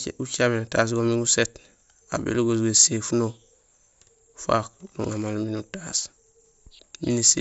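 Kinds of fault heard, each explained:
Concealed Bluetooth headset packet loss: brief concealed losses at 1.07, 2.95 and 4.71 s, where 7.5 to 15 ms of speech is filled with a copy of the preceding waveform, pointing to one or two lost mSBC packets between headset and phone.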